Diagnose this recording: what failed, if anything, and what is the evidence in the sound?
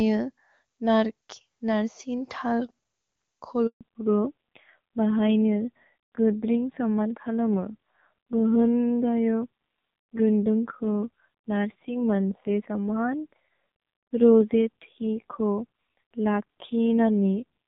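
Handover gap at 3.67 to 3.81 s, a network-stage fault: the speech cuts out abruptly and stays silent for 140 ms. While the call was being moved between networks no speech frames arrived, so whatever was said in that interval is simply missing.

Fallback to narrowband from 3.81 s to the end, a codec-stage fault: before the gap the HD Voice wideband codec sounds clean, but afterwards nothing above 4 kHz remains and the voice turns dull and raspy, which fits a drop to roughly 5.9 kbit/s AMR narrowband.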